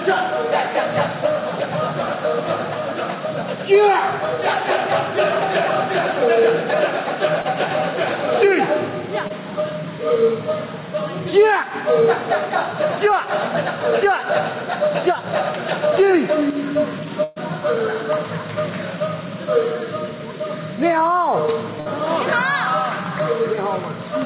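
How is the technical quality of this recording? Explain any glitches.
The recording came through a call path and has four dropouts: two tiny ones and two longer bursts. Its hard ceiling at 4 kHz points to a narrowband call codec along the lines of G.711 mu-law.

The short concealed packet loss hits at 7.42 s and 9.28 s. Each time roughly 20 ms of audio never made it to the decoder in time, and the receiver patched the hole by stretching the sound that came just before, then easing back into the real signal. You hear a quick smear or wobble.

The burst of packet loss is bigger. At 17.24 s about 120 ms went missing, and at 21.80 s about 60 ms. Here several packets' worth failed to arrive, so the receiver kept extending the last bit of sound while turning it down, and at 17.24 s there's no stretch of outright silence. The result is a held buzz or fading hiss, and then the audio picks up further along, with that chunk simply gone.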